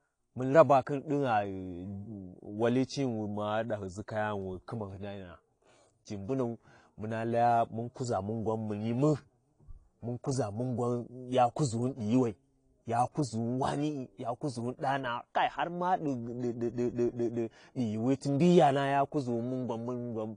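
AAC compression runs through the whole speech clip. Nothing sounds above about 10.1 kHz, so the top end is dull, and the damage is plainly audible as a smeared, warbling texture with fizzy sibilants. The cause is likely AAC-LC coding at a bitrate low enough to fit roughly 32 kbps. The encoder runs short of bits, lowers its cut-off and quantises the remaining frequency lines coarsely, which leaves gaps that the ear hears as swirl.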